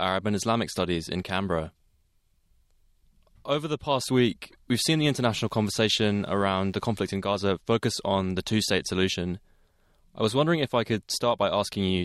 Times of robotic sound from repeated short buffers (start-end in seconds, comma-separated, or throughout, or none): none